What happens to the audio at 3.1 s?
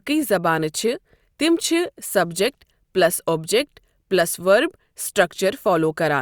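Nothing goes wrong at 3.1 s; the speech carries on intact through that moment, with no dropout, click or distortion.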